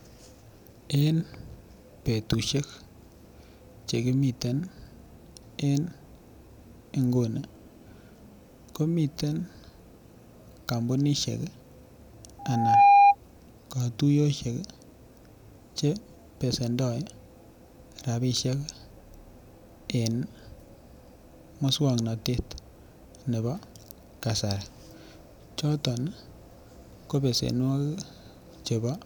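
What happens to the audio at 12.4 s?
At 12.39 s a loudspeaker feedback squeal kicks in and runs to about 13.15 s. The mic is picking up the speaker it's feeding, and around 807 Hz the loop gain tips past one, so that frequency keeps feeding itself. You hear a single steady tone swell up over roughly 0.4 s until it sits something like 15 dB above the speech, then it drops out.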